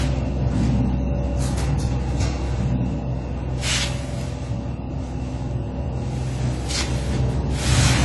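From start to finish the audio is dull and smeared, with a warbling, fizzy texture on sustained sounds and noisy high detail. The cause is likely AAC compression at a low bitrate, which fits something near 32 kbps. The encoder keeps too few bits to hold fine spectral detail and discards the top band entirely. A spectrogram shows nothing above 11.5 kHz, with a hard ceiling, patchy holes and blurred, blocky texture below it.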